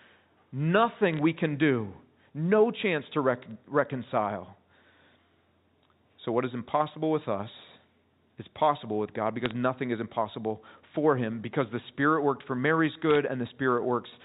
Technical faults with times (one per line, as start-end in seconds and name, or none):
1.14-1.19 bit errors on a digital phone line
3.51 bit errors on a digital phone line
9.46-9.51 bit errors on a digital phone line
13.10-13.16 bit errors on a digital phone line